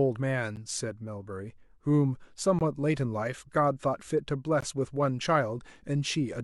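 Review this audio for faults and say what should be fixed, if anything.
Gap between stream segments at 0.56, 2.59 and 4.61 s: hard-edged silences of 10 to 20 ms recurring every 2 s where segment time stamps fail to meet. Unlike a dropout, no speech is lost, only pushed later. Aligning each segment's start time exactly with the previous segment's end would prevent it.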